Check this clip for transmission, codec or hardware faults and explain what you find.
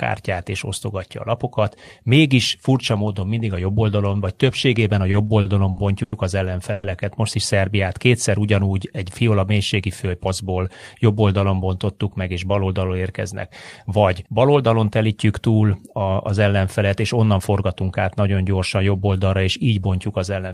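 There are three kinds of network-related problems here, all in how the receiver coped with uneven packet delivery.

Between 5.11 and 6.14 s there are repeated stalls (stutter). Packets kept turning up late, so the jitter buffer ran dry five times in a row. Each time the receiver stretched the last bit of sound to cover the wait, about 210 ms in total and 90 ms at the longest. That's roughly a fifth of that stretch. Nothing is actually lost, but the speech catches and drags, like a hiccuping line.

Right after, from 6.72 to 6.85 s, there's a short call audio freeze. The sound hangs for about 110 ms as a held, buzzy continuation of the previous moment, with no drop to silence, and then carries on from where it paused. The likely cause is packets held up in transit long enough to empty the buffer, which added about 110 ms of delay without skipping any speech.

Then come two jitter buffer speed-ups, at 9.58 to 10.58 s and 17.26 to 17.82 s. 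The buffer was holding more audio than it wanted, so the receiver trimmed tiny pitch-period slices over and over, around 70 ms each time. Playback runs at 107% and then 109%, with pitch unchanged, so the speech just sounds a little rushed in those spots.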